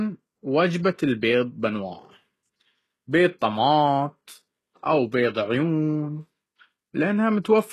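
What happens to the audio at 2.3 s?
At 2.3 s the speech carries the same damage heard throughout the clip: s sounds come out gritty and lispy, and the treble sounds bright but synthetic. The likely cause is HE-AAC compression at a very low bitrate, around 16 kbps, which rebuilds the upper band by copying lower harmonics upward instead of coding them. On a spectrogram the energy stops dead at 12.3 kHz, and the upper band just below that ceiling shows repeated, smeared texture rather than true harmonic lines.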